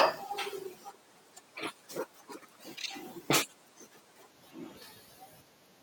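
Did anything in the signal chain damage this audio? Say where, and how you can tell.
Yes. From the start to 4.30 s the speech runs at 1.42 times its recorded speed, a section at the wrong speed. Pitch and tempo jump together, up roughly seven semitones, so everything sounds squeaky and rushed, then snaps back to normal for the remainder. Since pitch and timing move as one, this is most likely a playback or editing stage reading that stretch against the wrong clock, not a pitch effect.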